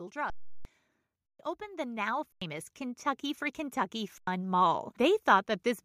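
At 0.30 s the speech stops dead for 0.35 s, until 0.65 s. This is an underrun with held sample: the output buffer ran dry, and the converter kept putting out its last value, so the waveform sits flat at that value. The sound cuts out almost without a click. Because live audio was dropped during the gap, roughly 0.4 s of it, the return at 0.65 s lands with a jump in the speech. The same thing happens at 1.26 s for 0.14 s, losing about 0.15 s.

From 1.58 s to 3.1 s, automatic gain rising lifts the level by about 6 dB. The gain control judged the input too quiet and raised its gain gradually, so speech and background swell together over roughly a second and a half. Within that rise, a 93 ms held-sample underrun at 2.32 s drops about 0.1 s of audio. Its length fits a 4096-sample buffer.

A second gain rise, again about 6 dB, runs from 3.91 s to 5.57 s. During it there is another 93 ms flat hold at 4.18 s.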